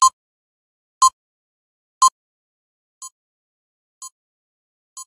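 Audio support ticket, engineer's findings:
2.08 s to 5.07 s: level falls about 24 dB, leaving a faint residue rather than silence. Likely one channel inverted, cancelling centre content in the mono sum; a dropout would go silent.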